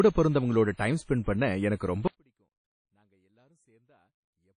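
The whole speech clip carries plainly audible codec damage, likely from WMA compression. Nothing is left above 10 kHz, which fits a low bitrate around 32 kbps. The transform coding spreads quantisation noise across long blocks, giving a ringing, washy sound with hiss that breathes with the speech.

From 0.74 to 0.79 s there is pre-echo. A sharp attack sat late in a coding block. Noise sized for the loud onset spilled into the quiet moment before it. So a hiss of about 55 ms leads in, and the attack sounds smeared.

At 2.08 s the speech suddenly drops out to a faint residue. It never returns before the end. The wanted signal was likely lost while the path stayed live. Only a faint sound remains, roughly 40 dB below the normal level.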